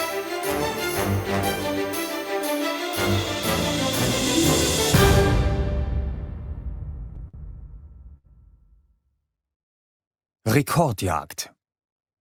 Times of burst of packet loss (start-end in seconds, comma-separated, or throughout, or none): 8.17-8.27